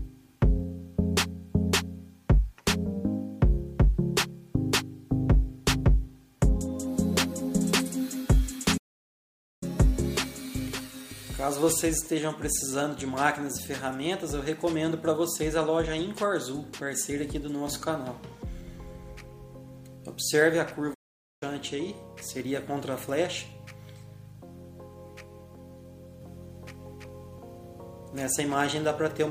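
At 8.77 s the sound cuts out mid-flow and stays silent until 9.63 s, a gap of about 0.84 s. A second gap runs from 20.94 to 21.43 s, about 0.47 s. These are playback stalls, likely from the player running short of data or its thread being blocked before output resumed.

From 26.21 s to the end, a doubled audio track appears. A second full-band copy trails the original by about two seconds at roughly equal level. It carries no decay or room colour, and it begins abruptly. The likely cause is the same audio being mixed in twice through a slower capture path.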